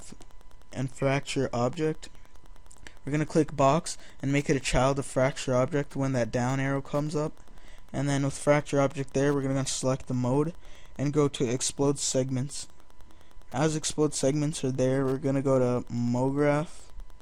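From start to finish a faint, steady ticking runs underneath the sound, well below the main signal, repeating every 102.4 ms, or roughly ten ticks a second. This is Wi-Fi interference: a nearby Wi-Fi radio's beacon transmissions are picked up and rectified by the audio circuit, turning each radio pulse into an audible click. The strict, roughly ten-per-second regularity distinguishes it from mobile-phone interference, which produces a faster, buzzier 217 Hz chatter.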